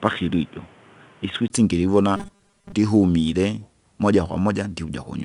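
From 0.0 to 1.5 s the sound is narrow and boxy. The input likely switched to a poorer device, such as a headset call profile. A 20 ms silence marks the switch, and a new noise floor sits roughly 30 dB down. Loudness barely changes, so the dullness comes from lost bandwidth rather than a drop in level.

Throughout the clip, 4-bit ADPCM compression leaves plainly audible gritty hiss that rises and falls with the speech. Attacks crack where the step size cannot grow quickly enough. A bitrate around 88 kbps at 4 bits per sample points to a roughly 22 kHz sample rate. The grit tracks the signal's level, unlike a fixed background hiss.

From 2.17 to 2.72 s the speech becomes a rigid metallic buzz at 200 Hz. Its likely cause is short buffers being repeated, each about 5 ms long, while most of the real audio in that stretch is skipped. The buzz holds one fixed pitch while still loosely following the speech, unlike the level-dependent grit of the codec.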